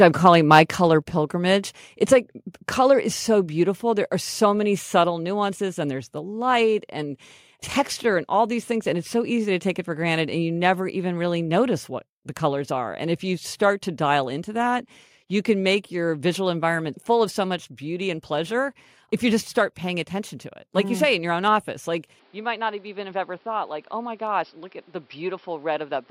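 From 0.02 to 0.61 s the loudest speech peaks are flattened, leaving a harsh, crackling edge. This is likely microphone overload: input gain drives the signal about 2 dB past the converter's ceiling, so around one percent of samples are clipped.

At 1.02 s the level of both speech and background falls abruptly by about 3 dB in a single step. This points to the microphone volume being stepped down, the call software cutting input gain after the clipped peaks just before.

At 22.19 s, right after "your own office like", the sound turns duller and boxier through to the end, with no gap at the transition. Level drops by about 5 dB, and a new noise floor sits roughly 30 dB below the speech, consistent with the input switched to a poorer device.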